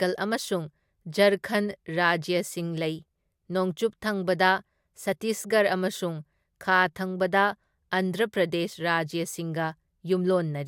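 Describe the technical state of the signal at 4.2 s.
At 4.2 s the speech signal is intact, with no dropout, distortion, glitch or other technical fault to be heard.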